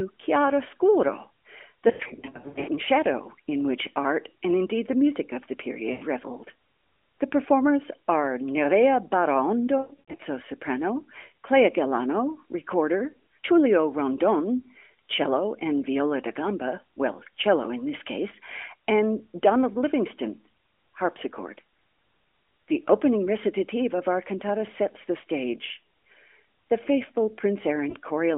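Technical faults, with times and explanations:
1.88–2.70 s, lost AMR speech frames: about 460 ms of gaps scattered over 800 ms, runs up to 80 ms, before "and shadow in which". The decoder repeats the last pitch and tract settings at falling gain, giving warbles and dips.
5.92–6.05 s, lost AMR speech frames: a 100 ms dropout after "the music of the", consistent with five consecutive 20 ms frames. Concealment smears the sound, fading it before recovery.
9.78–10.19 s, lost AMR speech frames: 240 ms lost across 400 ms, runs up to 80 ms. Each gap is filled with decaying repeated parameters, giving brief drawn-out, wavering fragments.
27.90–27.96 s, lost AMR speech frames: a 40 ms loss, fitting two frames. Concealment bridges it with a short dip or warble as gain drops and returns.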